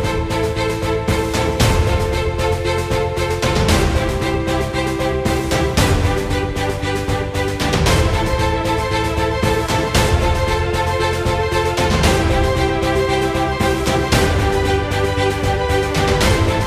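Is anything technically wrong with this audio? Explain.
No, nothing technically wrong can be heard in this audio. There is no fault to point to at any moment.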